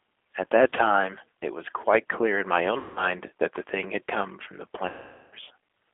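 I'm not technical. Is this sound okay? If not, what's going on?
No. Two separate problems can be heard.

The whole recording has passed through the G.729 codec, a compression method used for internet phone calls. It rebuilds speech from a simplified model of the voice instead of keeping the actual sound, so everything is squeezed into a narrow, phone-like band, roughly 250 Hz to 3.5 kHz. It sounds slightly rough and artificial. A merely muffled recording would lose the top end without that synthetic, grainy texture.

There are also three moments of VoIP packet loss concealed by the speech codec. Chunks of the call never arrived, and the decoder filled each gap by stretching its last bit of voice into a buzzy tone or a coloured noise that fades. This happens around 0.70 s, which is a brief blip of about 20 ms, then from 2.78 to 3.12 s and from 4.88 to 5.34 s. The voice stays weak for a moment afterwards. 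A plain dropout would be silence or a click instead.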